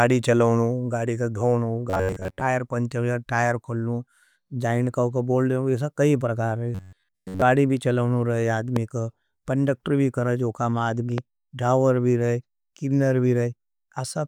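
Speech recording with two kinds of fault. Robotic sound from repeated short buffers appears at 1.90 to 2.41 s and 6.75 to 7.44 s. The playback likely ran short of new audio and looped its last fragment, skipping most of the real signal. The speech becomes a stiff metallic buzz near 93.8 Hz, which points to a buffer of roughly 11 ms. Loud pops appear at 8.76 to 8.79 s and 11.18 to 11.20 s, each a single sharp click about 10 dB above the speech, which continues underneath. They are likely from a voltage glitch or driver fault.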